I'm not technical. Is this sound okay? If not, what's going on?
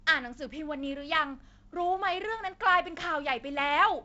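Yes, nothing in this sound has gone wrong.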